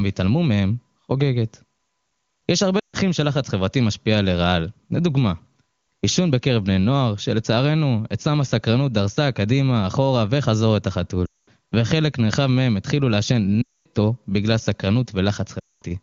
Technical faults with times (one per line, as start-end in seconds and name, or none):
2.79-2.96 lost AMR speech frames
11.25-11.48 lost AMR speech frames
13.61-13.86 lost AMR speech frames
15.60-15.82 lost AMR speech frames